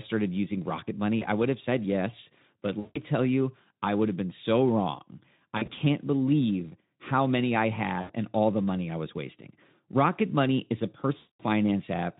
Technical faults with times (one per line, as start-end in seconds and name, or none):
1.19-1.26 VoIP packet loss concealed by the speech codec
2.80-3.00 VoIP packet loss concealed by the speech codec
5.57-5.81 VoIP packet loss concealed by the speech codec
8.01-8.12 VoIP packet loss concealed by the speech codec
11.17-11.42 VoIP packet loss concealed by the speech codec